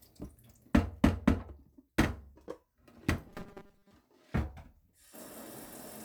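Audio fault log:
3.29–3.91 s robotic sound from repeated short buffers: a rigid 200 Hz buzz covers most of the sound, likely one 5 ms stretch looped while input lagged.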